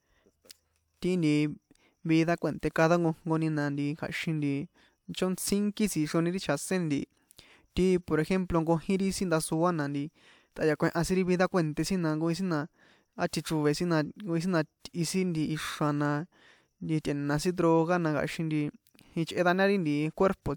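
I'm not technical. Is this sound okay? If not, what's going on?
Yes, no faults to report.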